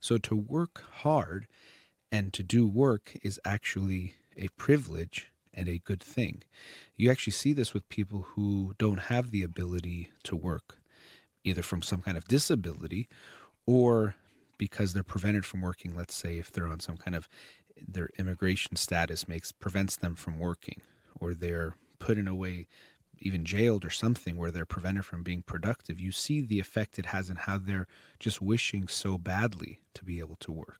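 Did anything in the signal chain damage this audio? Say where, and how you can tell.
No, nothing along the chain has left a mark on this speech that I can hear, so there's no stage to point at.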